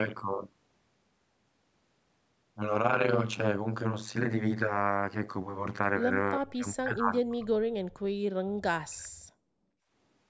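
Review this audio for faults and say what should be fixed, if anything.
Overlap-add ripple runs through the whole speech clip: frames rejoined with an overlap that doesn't sum to constant gain make the level swing by about 60 dB around a hundred times a second, a harsh metallic buzz. The waveform shows a dense comb-like envelope, and the spectrogram shows regular vertical striping. Use a window and hop pair that satisfies constant-overlap-add.

Speech suppressed in double talk is the likely cause of the speech collapsing from 6.39 to 8.16 s, by roughly 35 dB, and from 8.45 to 9.29 s, by roughly 40 dB. The canceller mistook the talker for loudspeaker echo and attenuated both. The waveform pinches down to near-flat stretches, and the spectrogram thins. Give the canceller reliable double-talk detection so it stops suppressing the near-end talker.

Background gated by the echo canceller appears from 9.57 to 9.84 s, when the room sound drops by about 21 dB for a moment during loudspeaker playback, then recovers. 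It shows as a short notch in the noise floor on the waveform and a brief dark gap across the spectrogram, which stays empty above 8 kHz throughout as usual for call processing. Use gentler suppression with comfort-noise fill.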